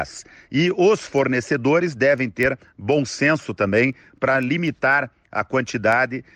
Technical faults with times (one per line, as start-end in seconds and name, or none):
0.18-6.17 word clock ticks